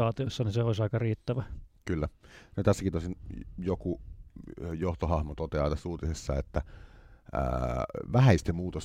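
Nothing goes wrong anywhere in this speech recording, so there's no technical fault to walk through.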